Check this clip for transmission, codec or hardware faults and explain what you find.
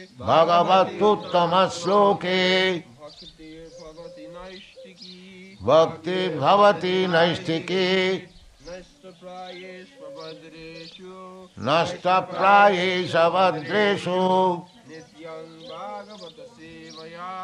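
No transmission, codec or hardware faults can be heard anywhere in the clip; the signal stays continuous and stable throughout.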